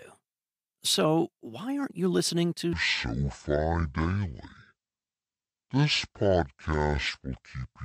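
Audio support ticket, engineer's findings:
Section at the wrong speed, 2.73 s to end, right after "aren't you listening to": plays at 0.54x, pitch roughly ten semitones down, deep and dragging. Likely clock/sample-rate mismatch in editor or player. Spectrogram: harmonics and formants squeezed downward. Waveform: envelopes visibly stretched.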